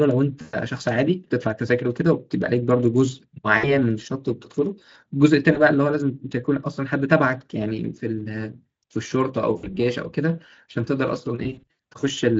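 Speech that briefly turns into buzzy, fading, smeared tone at 0.41–0.56, 3.57–3.80, 5.53–5.59, 9.57–9.74 and 11.43–11.72 s, the last a scattered cluster. This is VoIP packet loss concealed by the speech codec: the decoder stretches its last pitch and filter through each gap while lowering the gain.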